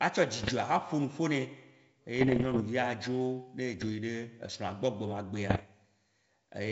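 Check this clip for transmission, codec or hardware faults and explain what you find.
The speech carries one kind of fault, heard four times over a G.722 wideband path that itself adds no more than faint coding damage.

Bit errors on an ADPCM link occur at 0.42–0.53 s, 2.16–2.64 s, 3.78–3.91 s and 5.49–5.64 s, at an error rate below one percent. Each flipped bit corrupts the decoder's step size and predictor, so the damage persists for milliseconds beyond the bit itself. The result is pops and rough bursts with brief level jumps, longest in the second stretch.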